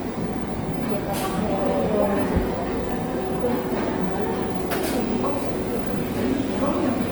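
Across the whole clip the sound has a plainly audible rough, grainy texture. Tonal parts turn noisy instead of clean, yet the spectrum stays full, with content reaching about 20.2 kHz and no obvious holes or swirling. That points to Opus compression as the likely cause, in its music (CELT) mode at a low rate consistent with around 24 kbps. The encoder keeps each band's energy but fills starved bands with folded or noise-like content, which produces this grit.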